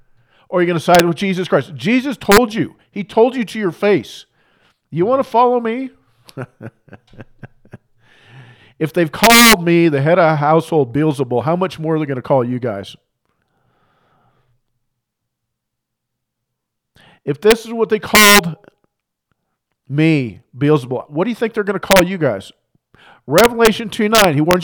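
Integer overflow cracks the speech at 0.95–1.00, 2.32–2.38, 9.24–9.53 (between "if they've" and "me the head of"), 17.51 (just before "is what they"), 18.15–18.39 (after "is what they"), 21.91–21.99, 23.38–23.67 and 24.15–24.53 s. Loud peaks pushed the signal only about 1 to 4 dB past full scale. Instead of being limited, those samples wrapped to the opposite extreme, giving harsh, violent cracks far sharper than clipping.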